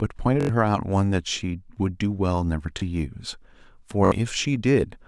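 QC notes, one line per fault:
0.41–0.49 s, repeated buffer: one 21 ms slice replays about four times, a stutter costing roughly 100 ms; waveform shows identical blocks with hard joins, fitting a 512-sample buffer.
2.80–2.82 s, repeated buffer: a single 21 ms slice plays twice, heard as a short stutter; spectrogram shows a vertical seam, about 20 ms of audio lost.
4.05–4.12 s, repeated buffer: a 21 ms slice loops roughly three extra times, a stutter losing around 70 ms; waveform shows repeating identical segments with abrupt edges.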